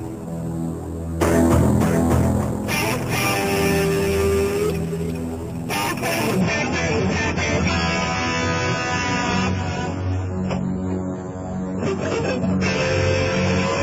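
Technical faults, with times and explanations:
6.41–13.83 s, adaptive stream at a lower bitrate: the player switched to a much lower-bitrate rendition of the stream, most likely because the connection slowed, and the weaker stream continues to the end. The encoder now discards everything above 7.7 kHz, so the treble suddenly goes dull, and the remaining bits are spread thin, bringing swirly, smeared codec artefacts. The drop is consistent with AAC falling from around 96 to 16 kbit/s, with no gap at the switch.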